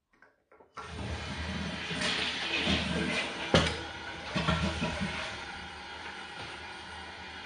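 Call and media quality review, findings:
Likely AAC compression at a low bitrate, consistent with about 32 kbps AAC-LC, throughout the clip. Encoder cuts the band at 9.6 kHz and starves upper bands of bits. Audible: dull top end, smeared transients, warbling, fizzy texture on sustained sound.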